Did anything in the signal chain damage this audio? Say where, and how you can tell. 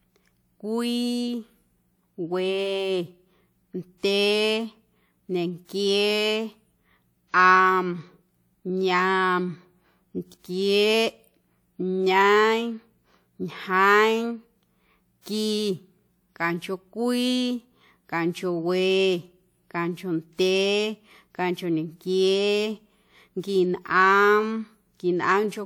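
Yes. A brief hiss smears in ahead of a sharp attack at 15.22 to 15.26 s. This is codec pre-echo: block quantisation noise spread 45 ms before the transient.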